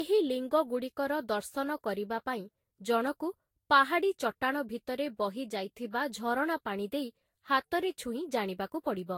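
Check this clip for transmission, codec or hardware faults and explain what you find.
There is one codec fault, present throughout: generation loss. The speech has likely passed through a lossy Vorbis encoder about seven times, each pass requantising on a new frame grid, at a rate near 63 kbit/s. The result is swirly, hollow, smeared sound with blurred attacks and nothing above 16.6 kHz.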